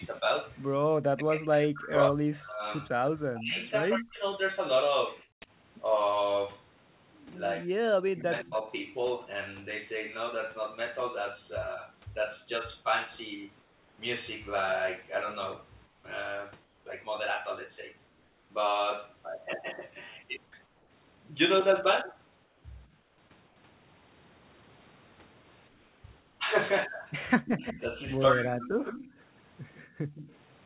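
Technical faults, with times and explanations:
0.16–3.93 s, 8.39–8.55 s, 27.28–30.35 s: echo leak. A copy of the speech returns 161 ms late, about 20 dB down, and about 10 dB down in the last span. This is likely a far-end loudspeaker echo that the canceller did not fully remove.
0.82–0.88 s, 5.24–5.48 s, 29.84–30.15 s: background gated by the echo canceller. The room sound briefly drops by about 25, 39 and 18 dB as the canceller clamps the microphone, then recovers.
1.16–4.21 s, 7.58–8.67 s, 27.40–28.81 s: speech suppressed in double talk. The talker's speech dips by roughly 35 to 40 dB in pieces while the other side talks, likely because the canceller could not separate the two voices.
13.62–13.98 s, 15.86–16.04 s, 16.64–16.86 s, 18.08–18.50 s, 20.66–20.90 s, 22.44–23.56 s, 25.68–26.40 s: comfort noise in place of the background. Steady, featureless hiss replaces the real background in pauses, about 3 to 6 dB quieter where measurable, likely from discontinuous transmission filling gaps with synthetic noise.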